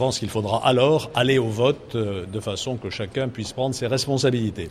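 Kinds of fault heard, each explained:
No technical faults can be heard in this clip.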